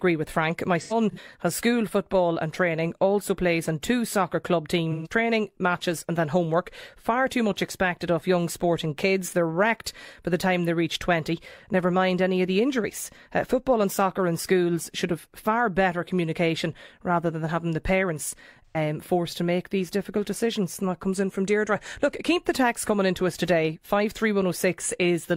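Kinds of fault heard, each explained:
AAC frame loss with concealment: Lost AAC frames were rebuilt from the last good spectrum. Speech smears noisily around 0.8–1.26, 4.91 and 18.66 seconds.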